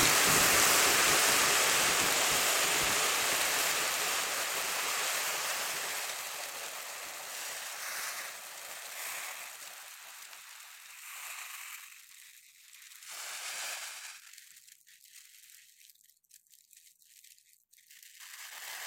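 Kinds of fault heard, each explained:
No faults detected: no dropouts, clicks, distortion or level problems anywhere in the recording.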